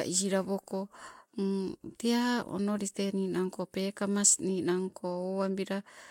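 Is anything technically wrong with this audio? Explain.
No, nothing technically wrong turns up here; it's just speech coming through with nothing getting in its way.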